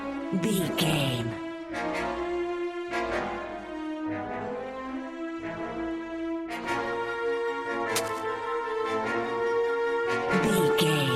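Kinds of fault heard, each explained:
DAB burbling: When reception is weak, bit errors slip past the digital radio's error correction and corrupt the MP2 audio data, so individual sub-bands jump in level for up to a frame. Here it is heard at 0.9 to 1.32 s, 6.64 to 6.93 s and 10.12 to 10.81 s, the middle burst the densest, from a small error rate. Unlike broadband scratching, the damage is tied to the audio's own frequency bands.
Cable scratch noise: From 7.95 to 8.24 s, a dense, uneven rustle of noise sits over the audio, roughly 5 dB below it. The likely cause is a worn cable, connector or control being moved, so that its contact resistance changes rapidly. What separates it from burbling is its character: the noise is gritty and broadband and sits on top of the audio, with none of the bubbling, frequency-band chirps of corrupted digital data.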